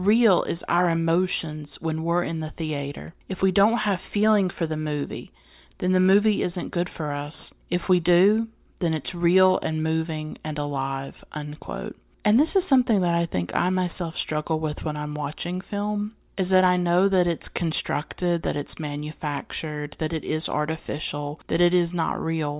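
No technical faults are audible.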